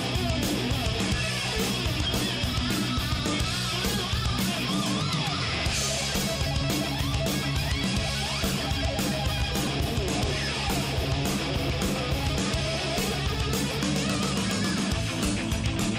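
The audio has periodic USB or driver dropouts from 2.53 s to 15.82 s: about fifteen tiny skips of roughly 2 ms each, spaced evenly every 1.02 s, heard as regular ticks. The strict one-second spacing points to a background task stalling the bus or driver, not random clicks.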